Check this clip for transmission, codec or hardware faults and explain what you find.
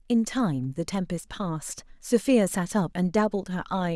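Nothing stands out here: the speech comes across steady and intact, with no faults to report.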